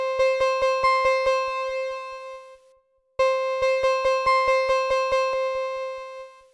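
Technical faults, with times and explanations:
No technical faults detected.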